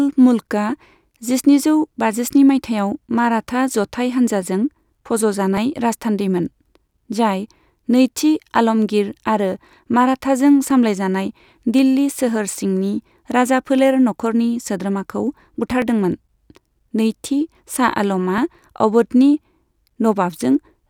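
Clicks every 2.56 s from 0.45 to 18.38 s, thin vertical spectrogram lines and waveform steps, are likely clock drift buffer slips dropping or repeating sample blocks.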